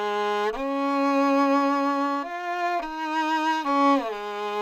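No technical faults can be heard anywhere in this audio.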